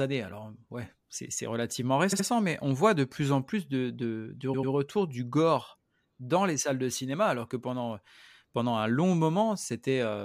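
A short run of compressed frames was sent more than once at 2.12 s, just after "alors ouais c'est relativement": a 69.7 ms block, consistent with three frames, plays twice extra, adding 139 ms and a stutter before "mais on voit de". The same repeated frames fault returns at 4.53 s after "en plus de de", where a 92.9 ms block repeats twice, adding 186 ms and a stutter before "du gore dans les".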